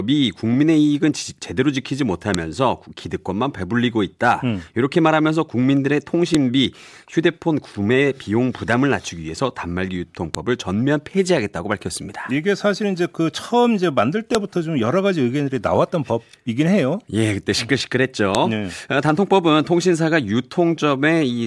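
Speech with sharp clicks at 2.34, 6.35, 10.35, 14.35 and 18.35 s, every 4 s. This is a file header played as audio: each joined piece's header bytes sound as a snap.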